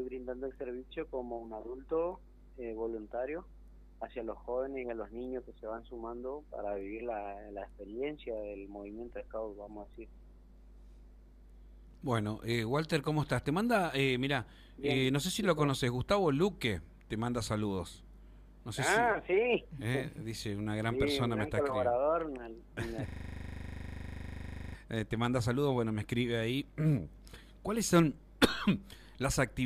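At 23.08 s a system hang loop begins and runs to 24.75 s. The playback side stalled while the hardware kept replaying one 40 ms stretch of its buffer, roughly forty times over, producing a rigid 25 Hz buzz in place of the sound.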